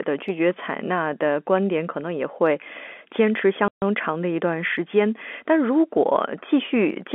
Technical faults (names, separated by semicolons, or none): packet loss filled with silence